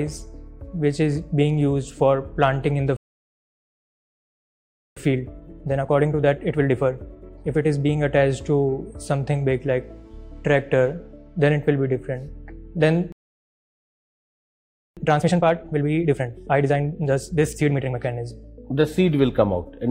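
At 2.97 s the output cuts to silence for 2 s, a playback stall, likely from the player running out of buffered data or its thread being blocked. The sound halts mid-flow and resumes at 4.97 s. From 4.97 to 7.97 s comes a time-compressed catch-up: the player trims its backlog by removing short segments and cross-fading the joins, so the audio runs at 1.25 times speed with unchanged pitch. A second playback stall silences the output from 13.12 to 14.97 s, about 1.84 s, likely from the same buffer underrun or thread block. A further time-compressed catch-up follows from 14.97 to 17.97 s at 1.5 times speed. It runs faster than the first.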